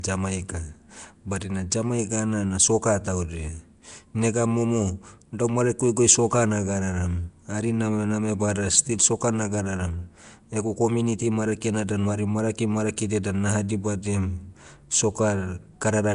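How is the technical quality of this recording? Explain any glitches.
Nellymoser compression, running through the whole recording, is the one fault, and it is plainly audible. Nothing reaches above 10.7 kHz, and the speech carries a rough, hissy halo with a smeared, underwater blur. The likely cause is the Nellymoser Asao codec once used for Flash microphones, at a rate that fits roughly 44 kbps. It spends a fixed, small bit budget on each short block, leaves weaker bands empty, and fills them with noise. That noise fill makes the grainy hiss, and the coarse blocks smear the sound.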